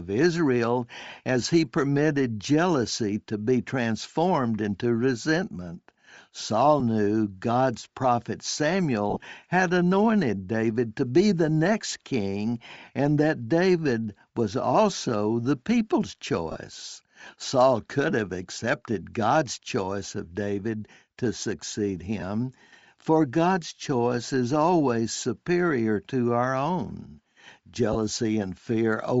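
It's a speech recording, and right through it there's a breathy, grainy edge on the voice where the top end has been hollowed out and filled back in with hiss. That's most likely Bluetooth LC3 compression, the LE Audio codec, running short 7.5 ms frames at a low rate, which fits something around 32 kbps. At that rate the encoder throws away much of the upper spectrum and the decoder papers over the gap with noise.

On top of that there are lost LE Audio frames. At 6.80 s there's a tiny blip about 7.5 ms long, which fits a single dropped frame. From 9.10 to 9.23 s the sound goes smeary and unstable in patches over about 120 ms, with the worst stretch lasting around 30 ms. Shorter noisy smudges turn up at 16.52 to 16.56 s, 22.20 to 22.22 s, and 27.93 to 27.96 s. In each one the decoder is repeating the last spectrum with scrambled phase, so the voice briefly turns into noisy mush instead of cutting out cleanly.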